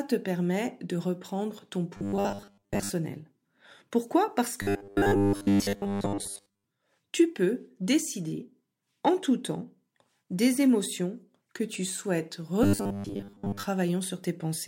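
From 1.97 to 2.90 s, right after "permet de reprendre ton", the speech turns into a rigid metallic buzz at 100 Hz, likely robotic sound from repeated short buffers. A roughly 10 ms block is looped in place of most of the real audio. On a spectrogram it shows as flat horizontal harmonics spaced 100 Hz apart, and the waveform shows identical repeating cycles. The same buzz returns from 4.62 to 6.64 s, ending just before "tu peux décider en", and again from 12.63 to 13.66 s. At 11.74 s, after "temps des émotions que", a small jump forward in the speech points to a dropped buffer (overrun), likely from samples being overwritten before they were read. A few milliseconds are lost, which appears as a step discontinuity in the waveform and a thin vertical line on the spectrogram.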